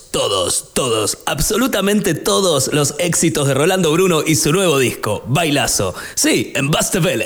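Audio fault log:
No faults heard anywhere in this clip.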